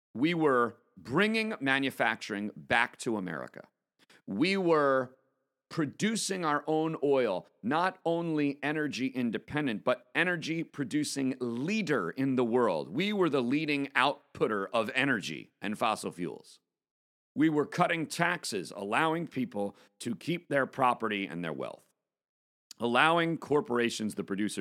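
No technical faults occur anywhere in the recording, so there are none to describe in time order.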